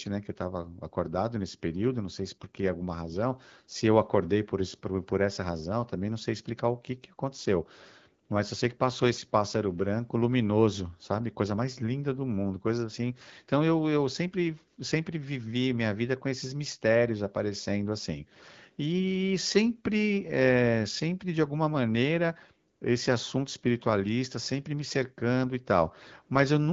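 No technical faults are audible.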